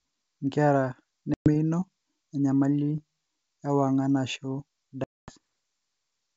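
Packet loss on an ADPCM call cuts 120 ms to hard-edged silence at 1.34 s, then 240 ms at 5.04 s, just after "ewangan ashu". The decoder's predictor and step size drift from the sender's, so speech returns slightly distorted and settles within some tens of milliseconds.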